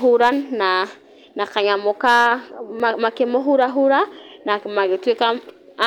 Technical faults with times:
2.80 block of digital silence

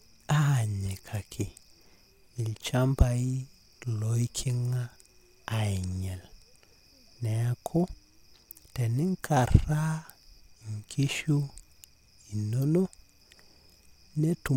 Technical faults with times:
none

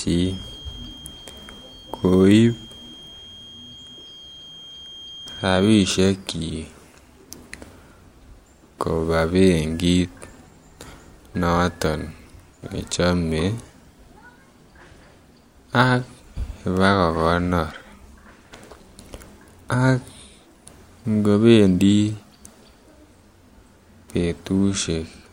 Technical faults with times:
0.00-6.06 feedback whistle

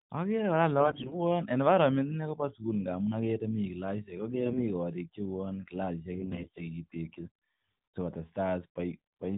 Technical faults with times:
0.80-1.17 AMR bit errors
4.34-4.64 AMR bit errors
6.14-6.67 AMR bit errors

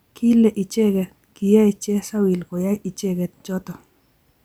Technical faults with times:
none

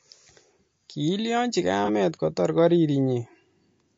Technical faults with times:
0.00-3.98 low-delay AAC compression
1.85-1.90 AAC frame loss with concealment

